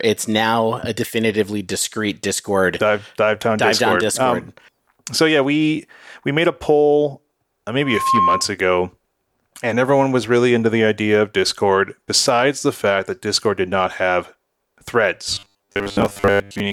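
Speech recording with two faults. From 7.81 to 8.51 s, loudspeaker feedback squeal: a 1.1 kHz tone swells over roughly 0.3 s to about 5 dB above the speech as the mic–speaker loop exceeds unity gain. From 15.35 s to the end, the voice becomes a rigid metallic 100 Hz buzz, robotic sound likely from repeated short buffers, consistent with 10 ms chunks replaying for most of that span.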